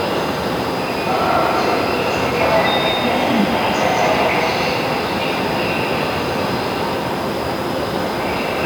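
No technical faults are audible anywhere in the recording.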